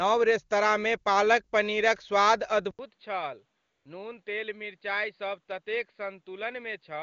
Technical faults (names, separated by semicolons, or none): input switched to a poorer device; AMR comfort noise